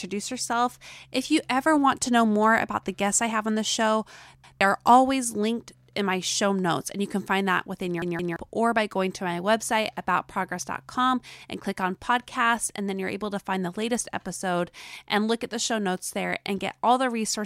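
Right after "have on the show" at 4.44 s, a repeated buffer: a 0.17 s chunk plays twice with a hard join, which fits an 8192-sample buffer. At 8.02 s, after "can find that within", a chunk of the same size stutters three times.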